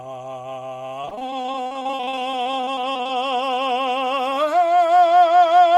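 From 1.01 s to 3.11 s the music breaks up with repeated packet loss (robotic sound). Dozens of short holes, the longest about 41 ms, are each patched by stretching the previous sound, so roughly a third of that span is filled in. The result is choppy and robotic, with pieces missing. On a spectrogram the stretch shows smeared, repeated frames and abrupt vertical seams. The waveform shows a stuttering, uneven envelope.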